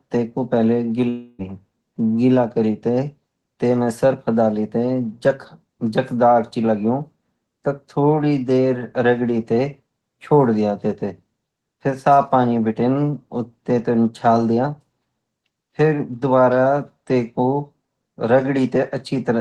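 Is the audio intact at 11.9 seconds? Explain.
Yes, the speech at 11.9 seconds is intact, with nothing there beyond the ordinary sound of the call path it passed through.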